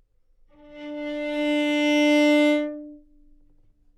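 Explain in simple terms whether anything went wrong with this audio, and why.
Nothing went wrong here.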